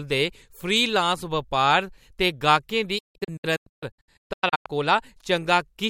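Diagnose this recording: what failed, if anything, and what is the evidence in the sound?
Digital broadcast dropout at reception: from 2.98 to 4.66 s the speech mutes in scattered holes up to 0.16 s, each with 8 ms fades. The gaps are true silence, not concealed as packet loss would be.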